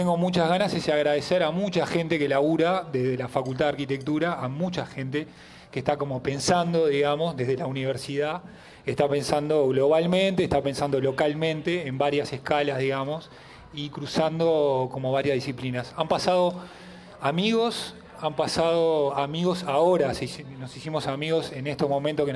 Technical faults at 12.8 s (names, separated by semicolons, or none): none